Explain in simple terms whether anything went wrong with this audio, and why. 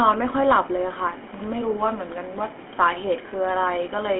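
Something did go wrong, and it lasts from start to end. The speech has been through the GSM full-rate codec, the coding used by early digital mobile phones. It rebuilds the voice from a simple model driven by regular pulses, so the voice sounds buzzy and gravelly. The damage is easy to hear. The sound is also squeezed into a phone-line band of roughly 250 Hz to 3.4 kHz, so it sounds thin, with no deep bass and no crisp top.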